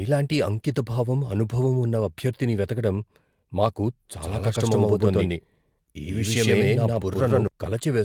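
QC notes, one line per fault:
0.37–0.39 s, 1.35–1.37 s and 6.93–6.95 s, lost packet rebuilt from error correction: at each point a single packet went missing in transit, and the decoder filled its 20 ms from the low-bitrate backup copy carried inside the following packet. The speech therefore never drops out, but each patch sounds briefly rougher and grainier than its surroundings, a short smear of added noise where the coarser stand-in was played.
4.21–7.47 s, doubled audio track: the speech is mixed in twice, most likely because a second, slower capture path or an edit put an out-of-step copy on top of the original. That copy sits roughly a tenth of a second behind and at about the same level, so everything in this stretch has a dry, flat slapback echo with no room decay, which cuts in and out abruptly at both ends.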